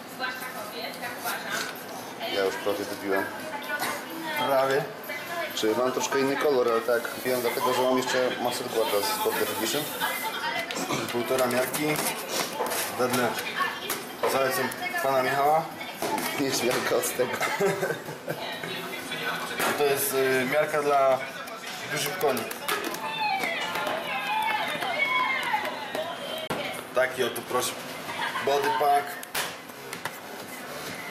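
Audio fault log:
26.47 to 26.50 s, CD skip: the playback drops out for about 30 ms and then picks up at a different spot, so you get a quick tick or gap followed by an abrupt jump in the sound. What's happening is the laser got knocked off its track, or tripped over a flaw, and landed on another turn of the disc's spiral. The player mutes briefly while it relocks, then just carries on from wherever it ended up.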